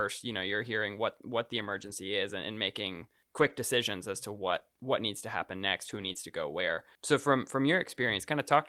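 Speech with two kinds of packet-loss damage. Lost packets rebuilt from error correction leave no gap but a rougher, noisier stretch where the decoder played low-bitrate backup copies: 1.57–1.91 s (about 180 ms), 3.37–3.51 s, 4.47–4.57 s, 5.85–6.11 s and 6.16–6.18 s. Short concealed packet loss is different. Nothing arrived for about 20 ms at 4.59–4.63 s and 6.13–6.16 s, so the receiver extended the preceding sound and blended back, giving a brief smear or wobble rather than grainy but continuous audio.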